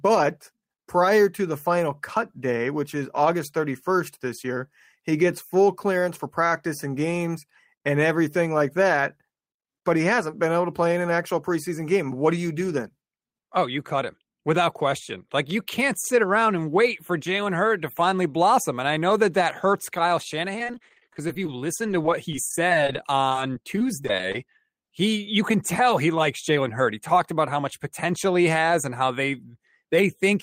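From 20.53 to 21.49 s the speech turns choppy and robotic. This is repeated packet loss. Audio kept failing to arrive, in holes of up to 17 ms each. The receiver patched each hole by extending the sound just before it. About a fifth of this stretch is patched sound. A second run follows from 21.87 to 24.47 s, with holes up to 21 ms. Here less than a tenth is patched.

At 24.82 s comes a short concealed packet loss. About 10 ms of audio went missing. The receiver filled it from the preceding sound and blended back into the real signal. It is heard as a brief smear or wobble, right after the robotic stretch ends.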